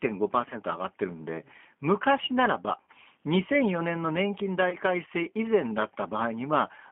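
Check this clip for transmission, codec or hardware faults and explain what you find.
Two faults are present: narrowband G.729 coding throughout, and three dropouts covered by packet loss concealment.

The G.729 codec colours the whole clip, and the damage is plainly audible. The speech sits in a telephone band of roughly 200 Hz to 3.4 kHz, with nothing above. The codec rebuilds each short frame from a vocal tract filter, a pitch predictor and a few pulses. That sparse model, which fits an 8 kbit/s rate, makes the speech rough and slightly synthetic.

VoIP packet loss concealed by the speech codec occurs at 0.50 to 0.56 s, 2.81 to 2.88 s and 4.70 to 4.76 s. The first and last gaps cover 20 ms of lost audio. The middle one covers 60 ms. In each, the decoder repeats its last pitch and filter with falling gain. The sound smears into a buzzy tone or coloured noise that fades. It stays weak briefly after the audio returns.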